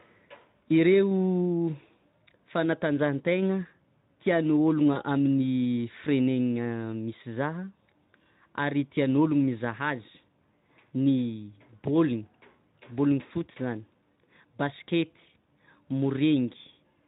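At 4.93 s there's a brief gap that gets papered over, VoIP packet loss concealed by the speech codec. The decoder guesses forward from its last pitch and filter, so the sound smears into a buzzy or noisy tone and dips until about 5.02 s. That fits one lost 20 ms frame, with the light Speex coarseness still audible around it.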